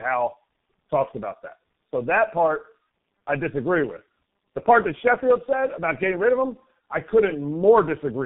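Throughout, the speech sounds rough, muffled and warbly, with nothing above 3.8 kHz. This is tandem speech coding: the signal was decoded and re-encoded by two low-rate speech codecs in turn, which fits G.729A followed by G.723.1, each compounding the other's damage.

From 6.61 s to the end, just after "getting rid of him", a fine hiss and grittiness rides on the louder and brighter sounds and drops away in pauses. This is sample clock jitter: timing wobble of roughly 0.4 microseconds in the converter's clock misplaces samples, leaving an error around 55 dB below the signal.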